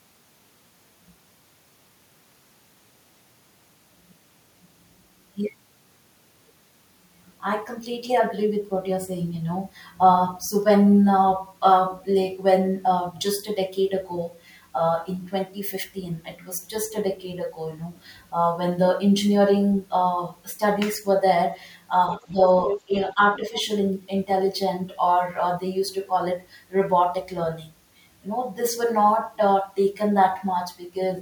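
Speech suppressed in double talk hits this speech recording in four short bursts, at 22.26 to 22.41 s, 22.86 to 22.97 s, 23.14 to 23.20 s and 23.38 to 23.54 s. Each is a brief dip lasting roughly 70 to 150 ms, falling by roughly 5 to 15 dB, deepest in the second. The likely cause is an echo canceller that, with both ends talking, could not tell the local talker from loudspeaker echo and pulled everything down. Between the first two dips, at 22.66 to 22.79 s, the other side's voice leaking through appears as a short scrap sitting only about 5 dB below the speech, likely residual far-end audio that the canceller failed to strip from the microphone signal.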